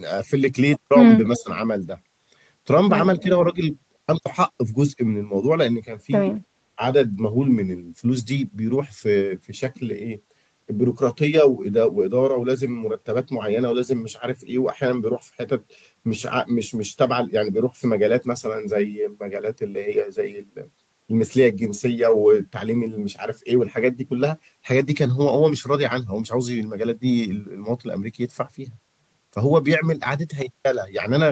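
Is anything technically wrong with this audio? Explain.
Yes, two related things, both brief. Around 1.35 to 1.4 s there's an echo leak: a faint, delayed copy of the sound, well below the main level and trailing by about 307 ms. That's likely a loudspeaker on the far end whose echo canceller didn't fully remove what its microphone picked up, so a scrap got sent back.

Right after that you get speech suppressed in double talk. From 1.39 to 1.49 s the sound dips noticeably, and there's a smaller dip from 3.24 to 3.29 s. The likely cause is the canceller seeing both sides active at once, failing to separate the talker from the echo, and turning everything down for a moment. The audio tops out around 8 kHz, which is just the Opus call bandwidth.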